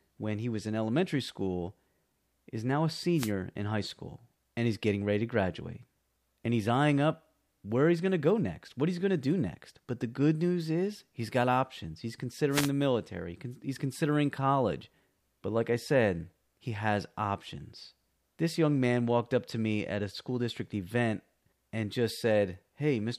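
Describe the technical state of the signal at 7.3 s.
At 7.3 s the speech signal is intact, with no audible dropout, distortion, glitch or other technical fault.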